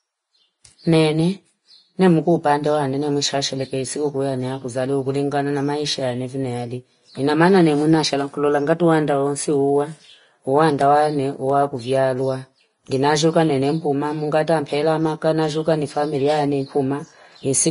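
Throughout the speech, nothing extends above 10.6 kHz, and the remaining treble sounds hissy and grainy, with roughened tones and smeared attacks. This is likely Vorbis compression at a low setting, consistent with about 31 kbps, where coarse quantisation turns fine high-frequency detail into noise.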